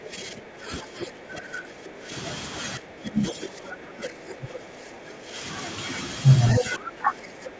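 From the start to 2.11 s the talker's level sinks by around 10 dB in stretches totalling about two seconds. This is speech suppressed in double talk: the likely cause is an echo canceller that, with both ends speaking at once, could not separate the near talker from loudspeaker echo and attenuated everything. The same dipping returns from 2.78 to 5.37 s, reaching roughly 15 dB down, and again from 6.6 s to the end, about 15 dB down for around a second.

Inside these passages, a second voice leaks through: the other side's voice, likely loudspeaker pickup that the echo canceller left in the microphone signal. Short scraps appear at 0.05 to 0.09 s, around 15 dB below the talker, and at 1.0 to 1.07 s, about 10 dB below. A longer fragment at 3.26 to 3.48 s sits about 10 dB under. The strongest, from 6.47 to 6.65 s, is roughly 5 dB above the talker, just as the final suppression begins.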